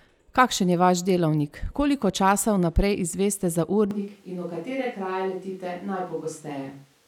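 Switch to a distant microphone from 3.91 s onward: speech abruptly turns hollow, roomy and bass-thin, about 5 dB quieter and noisier, likely because the close microphone dropped out.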